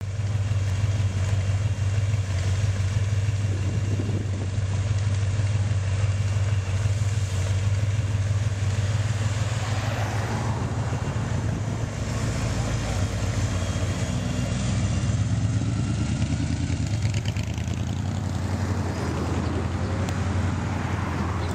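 At 4.31 s the treble suddenly dulls and a gritty hiss rises under the sound. It clears at 6.18 s. The same thing happens again from 14.47 to 16.84 s. Both are a Bluetooth SBC bit pool drop. A congested link forced the encoder to spend fewer bits. The top sub-bands lost their share, and the rest were quantised coarsely. The sound fits a bit pool falling from 28 to 12, near 96 kbps.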